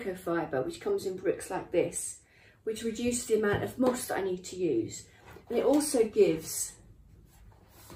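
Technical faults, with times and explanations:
No technical faults are audible in this clip.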